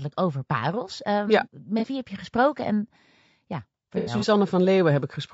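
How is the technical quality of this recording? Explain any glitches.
The recording has audible problems: coarse coding throughout and two short dropouts.

Across the whole clip, the speech sounds rough and grainy, with noise filling the gaps between harmonics and a thin, synthetic top end. The likely cause is low-delay AAC compression, as in AAC-ELD at roughly 32 kbps. Its short frames resolve pitch harmonics poorly, and bits run short.

From 1.79 to 1.85 s, about 30 ms of audio is missing and patched over. At 3.98 to 4.24 s, about 120 ms is lost across a 240 ms stretch, the longest gap roughly a tenth of a second. This is AAC frame loss with concealment. The decoder rebuilds the gaps from the last good spectrum. The first patch sounds like a brief smear. The second is a longer, noisy, phasey blur.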